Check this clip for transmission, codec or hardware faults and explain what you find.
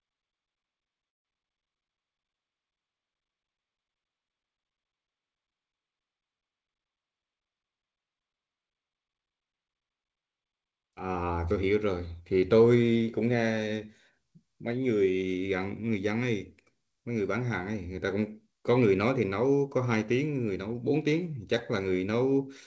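Two faults stand out in this speech, an early freeze and a later burst of faster delivery. The sound stops above 8 kHz throughout, as fits a G.722 call path at 64 kbps.

The call audio freeze runs from 1.08 to 1.27 s. The speech halts and a gap of about 167 ms opens. Nearly all of it, about 160 ms, is silence. The likely cause is packets held up in transit, draining the jitter buffer. When they arrive, the speech resumes where it stopped. Nothing is lost, but everything after lands later.

The jitter buffer speed-up runs from 6.99 to 8.38 s. The speech plays at about 111% speed with unchanged pitch, so it sounds hurried. The buffer was holding more audio than its target. To shrink the delay, the receiver cut many short pieces, each one or a few pitch periods long. Together they remove roughly 150 ms. That tightens the timing without any audible pitch shift.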